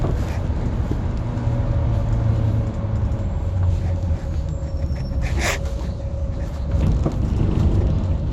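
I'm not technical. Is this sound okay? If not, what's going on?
No. Throughout, it sounds dull and plainly gurgly and grainy, with nothing above 16.7 kHz, likely from heavy MP2 compression discarding detail to save space.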